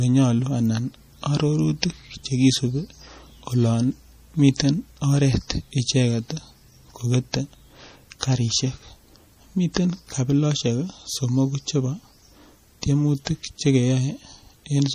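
Right from the start the whole recording has that watery, swirly quality you get from MP3 compression, and it's plainly audible. It's likely a heavily squeezed MP3, with the damage pointing to something around 40 kbps. Short of bits, the encoder has chopped everything above 15.2 kHz and keeps dropping weak frequency lines in and out from frame to frame. You hear that as a warbly shimmer and metallic, chirpy s sounds.

At 1.82 s there's a pre-echo, a hiss of about 13 ms that sits just ahead of a sharp attack. The codec spreads its quantisation noise evenly across each transform block, so when an onset lands late in a block, noise sized for the loud part leaks into the quiet gap just before it. That brief smear of hiss takes the edge off the attack and makes it sound soft.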